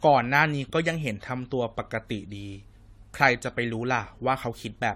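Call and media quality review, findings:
Generation loss, throughout the clip: likely repeated AAC-LC decode and re-encode at 64 kbit/s, about four passes. Each pass requantises on a shifted frame grid, so noise and spectral holes compound. Speech sounds swirly, hollow and smeared, consonant attacks blurred, nothing above 16.6 kHz.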